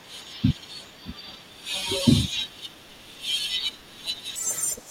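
Speech runs along fine until about 4.36 s, and from there to the end at 4.90 s it suddenly jumps to double speed and leaps up an octave. That's audio read two samples at a time: the reader is grabbing pairs of samples as if each pair were a single frame, probably because it thinks the stream has two channels or wider samples than it does.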